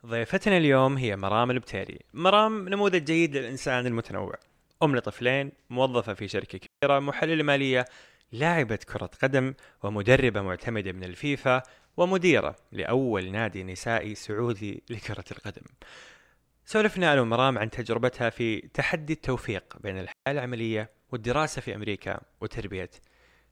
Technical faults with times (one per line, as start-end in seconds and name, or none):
6.66-6.83 digital wireless dropout
20.12-20.26 digital wireless dropout